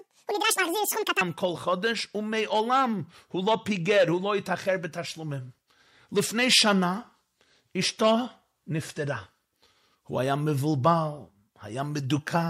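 From 0.0 to 1.21 s the speech is audio read two samples at a time (double speed). Sample pairs were taken as single frames, so it runs twice as fast and an octave higher. A spectrogram shows widely spaced harmonics and time-compressed syllables.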